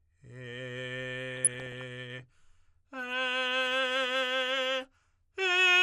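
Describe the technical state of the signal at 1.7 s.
DAB burbling runs from 1.31 to 1.82 s. Bit errors slip past error correction, so single sub-bands lurch in level frame by frame, producing bubbling, squelchy chirps across the music. Throughout, a dull, gurgling granularity points to MP2 compression, likely at a low rate near 80 kbps, with starved upper bands switched off and the rest coarsely quantised.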